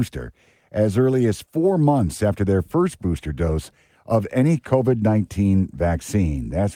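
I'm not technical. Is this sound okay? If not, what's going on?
Yes, this recording sounds fine; nothing here needs fixing.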